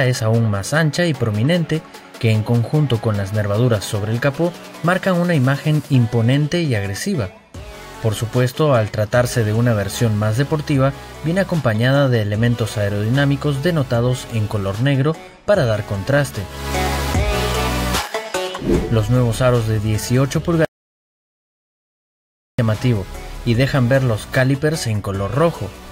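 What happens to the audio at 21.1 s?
At 21.1 s you're inside an audio dropout to silence running from 20.65 to 22.59 s: nearly two seconds of silence, no room tone, likely a lost input link.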